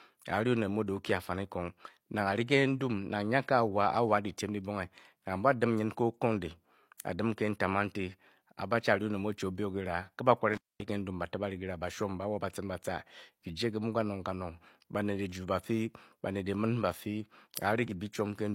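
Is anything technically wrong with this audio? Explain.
Yes. This speech clip has one fault, an intermittent contact, between 10.53 and 10.84 s. A loose cable or plug briefly loses its connection, so the signal path opens. The speech drops out for about 226 ms inside that span. Crackle marks the edges, as the metal surfaces scrape apart and then meet again. While the line is open, a faint hiss remains where the speech should be.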